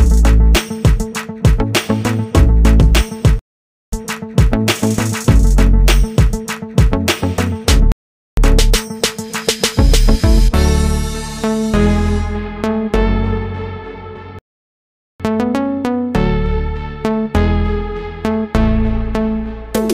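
The player drained its buffer of downloaded audio three times, causing rebuffering stalls. Playback falls silent at 3.39 s for 0.53 s, at 7.92 s for 0.45 s, and at 14.39 s for 0.81 s, then resumes exactly where it stopped, adding time without losing any audio.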